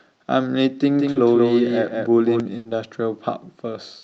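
From 0.9 to 2.4 s the speech is heard twice, a doubled audio track. The likely cause is a second, slower capture path or an edit leaving two copies out of step. A full-band copy, a few decibels quieter than the original, trails it by roughly a fifth of a second, with no reverberant tail or room colour. It starts and stops abruptly at those times, giving a hard, slapback-like echo.

At 1.11 to 1.17 s, inside that doubled stretch, there is a short concealed packet loss. About 40 ms of the call failed to reach the decoder in time, and the receiver filled the hole by extending the preceding sound before blending back into the real signal. This shows up as a brief smear or wobble in the speech.

At 2.57 to 2.67 s a burst of packet loss removed about 80 ms of audio in a row. The receiver continued the last sound and let it fade as the gap lengthened, so it comes across as a held buzz or fading hiss in place of the speech. 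When playback resumes, it picks up further along, and the section in between is gone.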